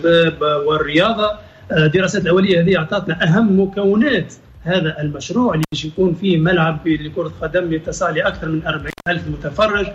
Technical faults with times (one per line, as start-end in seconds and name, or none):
5.63-5.74 intermittent contact
8.88-9.07 intermittent contact